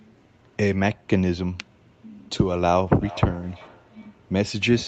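From 2.97 s to the end, the speech has feedback echo between two devices. One device in the room plays what the other's microphone sent, and that microphone picks it up again. Each phrase returns roughly every 0.4 s, thinner and ringing, about 19 dB below the speech.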